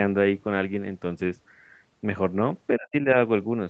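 Speech carried over a band-limited call path, with nothing above 8 kHz. Between 2.78 and 3.08 s the talker's level collapses in pieces, falling by roughly 35 dB at its deepest and missing for about a fifth of a second in total. This is likely speech suppressed in double talk: with both ends active, the echo canceller could not tell the near talker from loudspeaker echo and attenuated both together.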